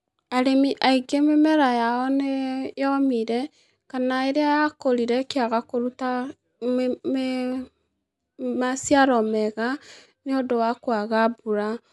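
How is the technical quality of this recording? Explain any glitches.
The speech recording comes through as a continuous, undisturbed signal, with no glitches or technical faults to be heard anywhere in it.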